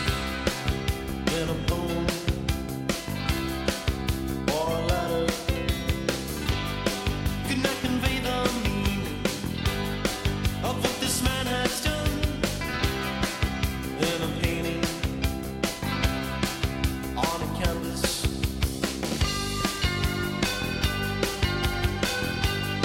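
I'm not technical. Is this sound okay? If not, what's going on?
No. At 7.26 s the sound jumps ahead slightly, most likely a dropped buffer (overrun): the computer missed a tiny slice, about 20 milliseconds.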